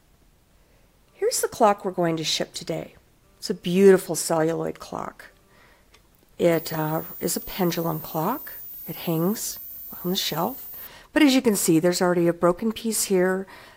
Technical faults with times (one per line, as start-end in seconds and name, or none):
6.52-10.87 switching supply whistle